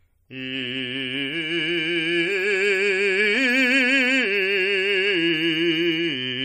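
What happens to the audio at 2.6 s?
At 2.6 s the music carries MP3 compression throughout, likely at a low bitrate near 40 kbps: watery, swirly treble, and a spectrogram shows nothing above 14.9 kHz, with flickering gaps.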